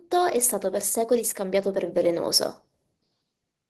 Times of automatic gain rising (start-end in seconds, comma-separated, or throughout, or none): 0.10-2.37